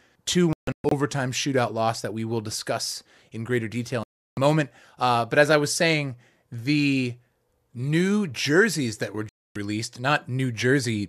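Digital broadcast dropouts break up this speech three times. From 0.53 to 0.92 s, just before "shootout loss that we", the receiver mutes in short holes totalling about 288 ms, the longest 144 ms, as corrupted frames are discarded. After "discuss in greater detail" the sound cuts out from 4.03 to 4.38 s, and after "new jerseys that were" from 9.29 to 9.56 s. In each gap the transmitted audio is simply lost, not delayed.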